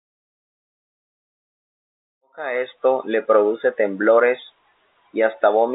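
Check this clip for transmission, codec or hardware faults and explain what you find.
No transmission, codec or hardware faults.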